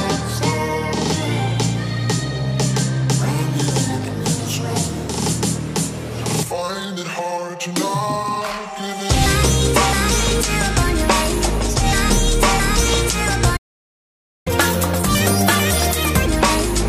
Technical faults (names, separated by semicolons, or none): playback stall; catch-up at higher speed